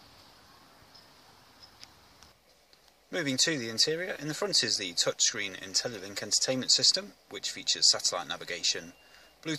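At 4.16 s there is a block of digital silence lasting about 2.9 ms, which fits a 128-sample buffer left unfilled. The sound drops abruptly to silence and returns, heard as a single tick. The waveform shows a flat gap, and the spectrogram shows a thin vertical broadband line.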